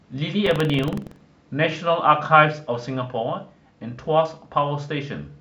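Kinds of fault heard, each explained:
Buffer tearing: writer and reader cross each period, splicing in a sliver of older audio, producing a 21.5 Hz rattle from 0.42 to 1.23 s.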